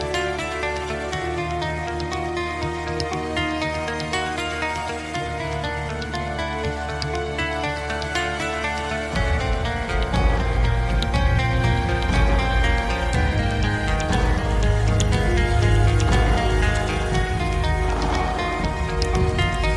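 No technical faults can be heard anywhere in the audio, with the signal holding steady and continuous throughout.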